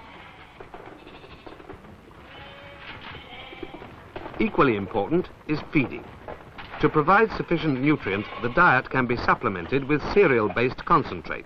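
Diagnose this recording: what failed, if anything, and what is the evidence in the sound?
Nothing in this recording points to a failure. No stage of the chain, from the analogue input through conversion, buffering and storage to playback, leaves any audible sign of trouble.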